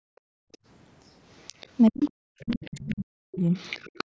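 Speech clip with background gated by the echo canceller from 0.0 to 0.61 s and from 4.04 s to the end, where room noise drops by up to about 40 dB, showing as near-blank spectrogram gaps. The other side's voice is leaking through at 0.52–0.57, 1.39–1.67, 2.04–2.95 and 3.54–4.04 s, faint traces rising from very quiet to about 20 dB below the speech, likely residual loudspeaker echo the canceller missed. Speech is suppressed in double talk from 1.89 to 3.45 s, dipping as much as about 40 dB as hollowed, chopped waveform envelopes, likely the canceller ducking both voices during overlap.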